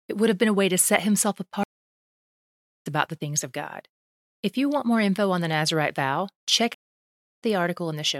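Speech with two stream reconnects. After "way to set himself" the audio goes silent from 1.63 to 2.87 s for about 1.2 s and returns at "about the things of", roughly a second and a half further on. A second break from 6.74 to 7.43 s holds 0.65 s of silence and resumes about a tenth of a second ahead. A plain dropout would pick up where it stopped; here the connection broke and a fresh decoder rejoined the live stream, so the lost material is skipped.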